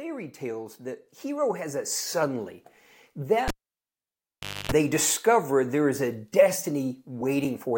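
At 3.48 s, a cable is pulled and plugged in: pops bracket 1.19 s of near silence, and 50 Hz mains buzz sets it apart from a dropout.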